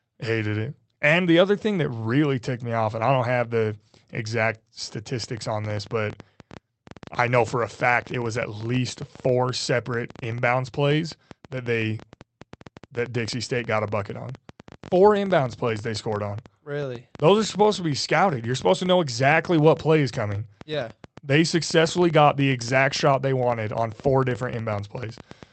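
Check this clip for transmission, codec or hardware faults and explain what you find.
One fault is present: a train of clicks. From 5.24 s to the end, irregular clicks arrive about ten times a second, roughly as loud as the speech. Likely interference or a faulty connection. They tick through the pauses too; the call path's top end is 8 kHz.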